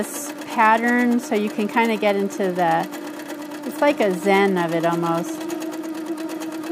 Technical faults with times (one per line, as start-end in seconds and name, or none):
none